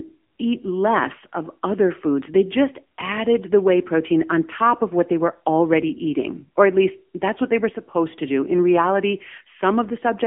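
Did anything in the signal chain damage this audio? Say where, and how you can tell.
Yes, at the codec stage, for the whole clip: AMR narrowband mobile codec damage. Nothing passes above 3.5 kHz, and the speech sits in a 200 Hz to 3.4 kHz line band. A plain band-limited line wouldn't add the clearly buzzy, synthetic timbre, which fits a low-bitrate AMR-NB mode near 8 kbps rebuilding the voice from a vocal-tract model.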